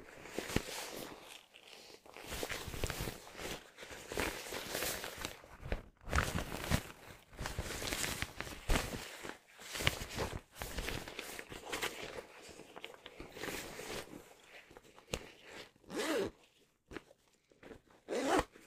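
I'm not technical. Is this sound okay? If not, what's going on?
Yes, this sound is okay, and nothing in it points to a technical problem. There's no moment in the clip where anything goes wrong.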